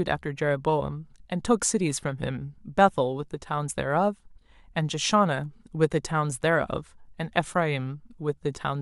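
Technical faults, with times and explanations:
Nothing technical stands out anywhere in this speech recording, so there are no faults to list.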